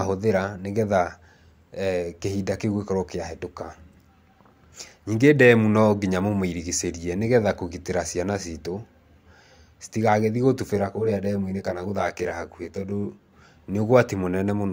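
From 10.76 to 13.33 s, channel delay causes comb filtering. One channel lags roughly 20 ms. Summed to mono, speech turns rough and slightly doubled, notched from about 30 Hz upward.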